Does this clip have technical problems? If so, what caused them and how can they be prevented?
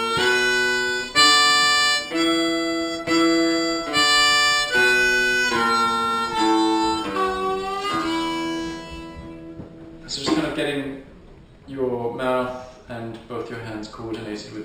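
Yes. Throughout the clip there is imaging from linear upsampling: the audio was raised to a higher rate by joining samples with straight lines rather than a proper low-pass filter, which fits a 12 kHz source converted to 48 kHz. That crude interpolation dulls the top of the original band near 6 kHz and leaves a mirrored copy of the spectrum from 6 kHz to 12 kHz, roughly 15 dB down, heard as a faint metallic shimmer on bright, sibilant sounds. Prevent it by resampling with a band-limited, high-quality filter (sinc or polyphase) instead of linear interpolation.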